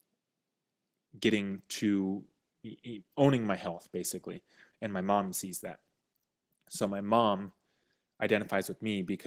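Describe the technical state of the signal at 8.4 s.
At 8.4 s the speech is still inside an adaptive stream at a lower bitrate, a stretch that begins abruptly at 1.07 s and runs to the end of the clip. The connection evidently slowed and the player switched to a leaner encoding, which fits a step from 64 to 16 kbit/s Opus. Codec artefacts are heavier here. Unlike a rebuffering stall, the switch leaves no gap, only a sudden fall in quality.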